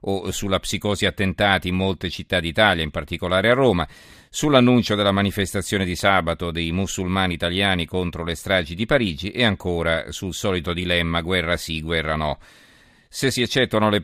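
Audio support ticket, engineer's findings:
Clock slip clicks, 0.23–14.02 s. Faint regular ticks about every fifth of a second, some 70 in all, heard under the speech and absent in pauses. One sample dropped or repeated per slip. Likely two unsynchronised device clocks differing by around 100 ppm. Check the clock source and sync between interfaces.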